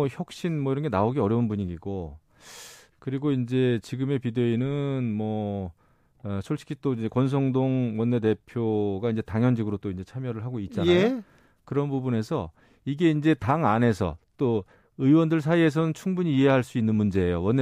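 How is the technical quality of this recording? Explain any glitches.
The technical quality of this recording is sound, with no glitches to explain.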